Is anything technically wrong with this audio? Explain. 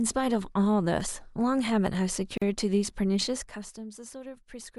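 Yes. From 2.38 to 2.42 s there is a gap at a join of encoded pieces: separately encoded segments were spliced untrimmed, leaving about 42 ms of encoder delay and padding silence before the speech resumes.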